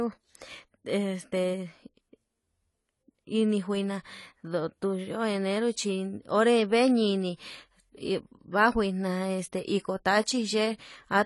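Throughout the speech, the audio sounds dull and smeared, with plainly audible coding damage, likely AAC compression at a low bitrate, which fits roughly 32 kbps AAC-LC. A spectrogram shows nothing above 11.5 kHz, a flat ceiling where the encoder discarded the top band.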